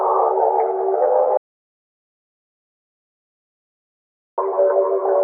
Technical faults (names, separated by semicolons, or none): audio dropout to silence